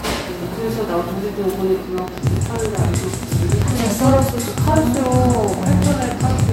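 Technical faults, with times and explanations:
1.98 to 6.50 s, train of clicks: a steady ticking lands on top of the sound at about 10.4 clicks per second, evenly spaced, some fifty in all, each peaking around 15 dB above the material and audible through quiet moments as well. The pulses share one shape and a fixed rhythm, so they come from a repeating outside source, likely interference from nearby equipment or a faulty connection or power supply, rather than scattered random crackle or damage within the recording itself.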